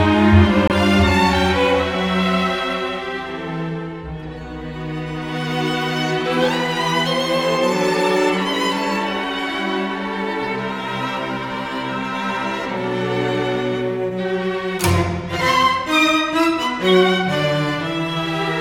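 The audio has a Bluetooth dropout from 0.68 to 0.71 s. The sound cuts to silence. When it returns, it has moved on as if it had kept playing. About 23 ms of audio is missing, which fits a single lost packet. The likely cause is wireless data arriving too late at the headphones.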